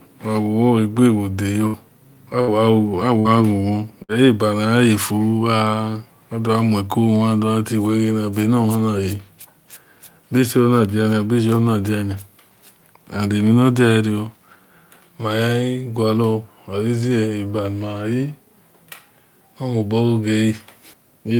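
Bursts of packet loss interrupt this speech recording four times, at 1.67 to 1.76 s, 2.41 to 2.50 s, 3.19 to 3.28 s and 4.03 to 4.12 s. Each time, a run of packets failed to arrive in time, and the receiver covered the hole by extending the last sound for roughly 55 to 64 ms while fading it down, producing a brief held buzz or hiss. About 60 ms of speech is then skipped before playback resumes.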